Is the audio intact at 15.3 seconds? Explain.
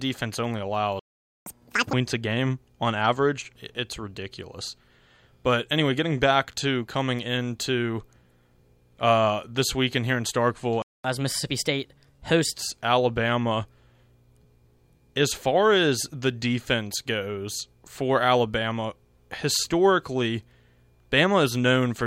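Yes, at 15.3 seconds the speech plays through cleanly, with no dropout, click, distortion or other break in the sound.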